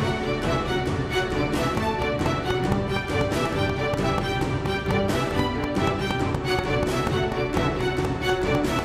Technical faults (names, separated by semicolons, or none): train of clicks